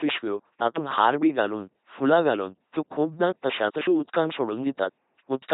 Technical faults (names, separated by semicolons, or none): LPC-10 vocoder